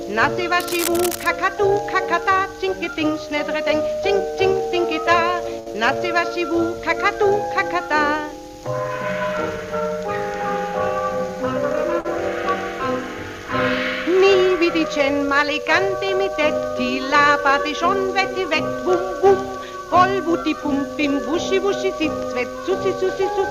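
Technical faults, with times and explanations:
0.60–1.28 s, cable scratch noise: a dense, uneven burst of scratchy rustling sits over the sound, fairly loud at roughly 10 dB below it. This is likely a worn cable or connector being moved, its contact resistance flickering. Unlike packet faults, nothing is held or skipped.
5.59–5.69 s and 12.00–12.07 s, short stall from a late packet: the sound is held and stretched for about 71 ms, then 46 ms, with a slight buzz or dip, then resumes exactly where it stopped. The jitter buffer ran dry waiting for a late packet, so nothing is lost, only delayed.
5.73–5.76 s, short concealed packet loss: about 40 ms of audio never arrived. Roughly 16 ms of synthesised continuation bridges the hole before blending back, and the timing jumps ahead by about 20 ms. The result is a brief smear or wobble with a little sound genuinely missing, unlike the stalls.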